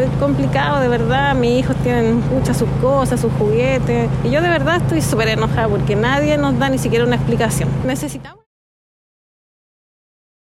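No faults detected; the audio ends in a smooth fade-out from about 7.5 s to 8.47 s, with no click or hard edge at the tail.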